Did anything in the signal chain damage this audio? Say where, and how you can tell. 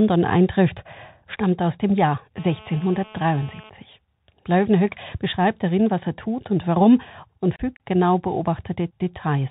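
Yes. The Bluetooth CVSD headset codec damages the whole clip at the codec stage. Nothing above 4 kHz survives, s sounds are scratchy, and a granular hiss sits under the speech. This plainly audible damage fits a 64 kbps CVSD link, whose one-bit delta steps can't keep up with loud high-frequency sound.

GSM phone buzz runs from 2.37 to 3.70 s in the analogue wiring. It is a hard, raspy 217 Hz buzz with many harmonics, about 23 dB below the speech, steady as during a call. The audio circuitry rectified a nearby phone's radio bursts into the signal.

Unconcealed Bluetooth headset packet loss occurs at 7.56 to 7.61 s on the wireless link, just after "tut und warum und". About 30 ms of speech drops out with abrupt edges, consistent with a few lost voice packets. Silence or an idle pattern took their place because nothing was filled in to conceal the gap.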